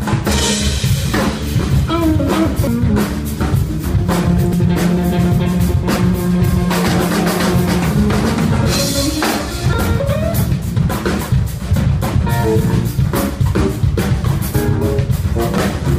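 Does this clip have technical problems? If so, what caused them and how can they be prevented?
Yes. Damaged data in a compressed stream causes brief chirps or blips at 2.67, 4.53, 9.73 and 15.58 s. At each point corrupted bytes leave the decoder unable to read a frame, so it loses sync and hunts for the next valid header. A spectrogram shows a thin vertical broadband streak at each time, and the waveform shows a short discontinuity. Prevent it by storing and transmitting the stream over checksummed, error-corrected links.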